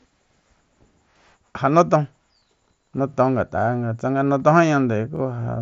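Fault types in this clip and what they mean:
Overlapping chunks: each 2-second chunk begins 25 ms before the previous one ended, so that slice replays at 1.11, 3.14 and 5.16 s as a brief stutter. The waveform shows a doubled 25 ms segment with a step at each join. The spectrogram shows a thin vertical broadband line.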